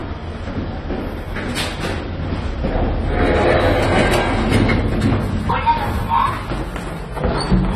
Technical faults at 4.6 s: AAC compression

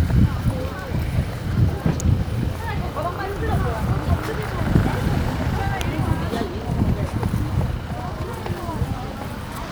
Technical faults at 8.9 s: none

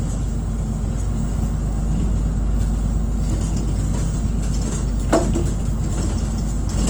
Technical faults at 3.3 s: Opus compression

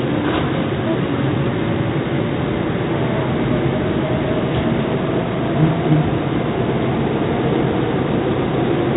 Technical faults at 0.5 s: 4-bit ADPCM compression

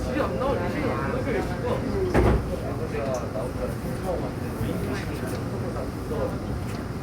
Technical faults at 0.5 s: none

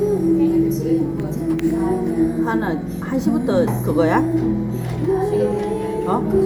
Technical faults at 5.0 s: none

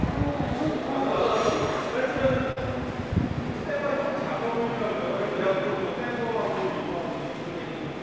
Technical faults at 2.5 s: short concealed packet loss

